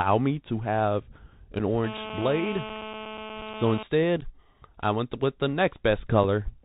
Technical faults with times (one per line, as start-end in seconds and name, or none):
0.00-6.64 Bluetooth CVSD headset codec
1.59 unconcealed Bluetooth headset packet loss
1.84-3.83 GSM phone buzz
4.21-4.23 unconcealed Bluetooth headset packet loss
6.24 unconcealed Bluetooth headset packet loss